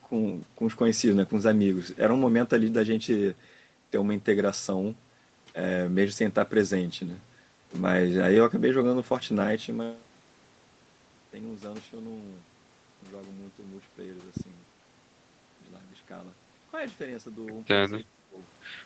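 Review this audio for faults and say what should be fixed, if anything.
Speech suppressed in double talk, 18.04–18.38 s: the level dips by up to about 15 dB for roughly 150 ms, likely from the echo canceller attenuating during simultaneous far-end speech. Better double-talk detection in the echo canceller, or a headset to remove loudspeaker echo, would prevent it.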